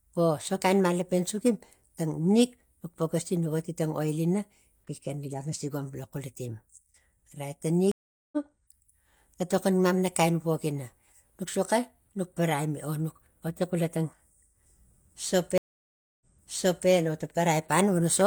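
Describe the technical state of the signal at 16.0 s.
At 16.0 s the speech has dropped to dead silence, part of a 630 ms gap within a stream reconnect spanning 15.58 to 16.89 s. When sound returns it jumps back about 0.68 s, repeating material, because the link broke, a fresh decoder restarted and the server resent earlier audio.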